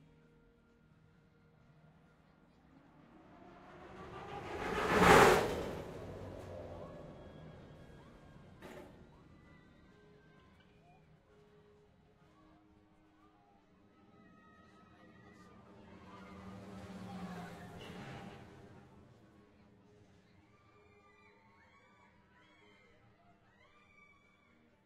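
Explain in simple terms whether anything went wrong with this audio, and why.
From 12.58 s to the end, channel delay (comb filtering) makes the sound hollow: one channel runs about 10 ms late, cancelling evenly spaced frequencies from around 50 Hz upward.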